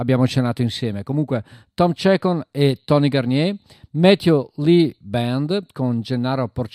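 No technical faults are audible.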